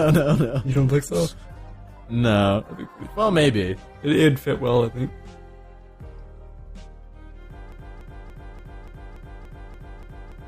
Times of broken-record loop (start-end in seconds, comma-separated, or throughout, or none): 7.72-10.47